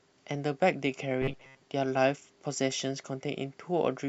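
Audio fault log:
1.22–1.61 s, robotic sound from repeated short buffers: audio likely arrived too seldom, so a 7.5 ms slice kept repeating, imposing a metallic 134 Hz buzz.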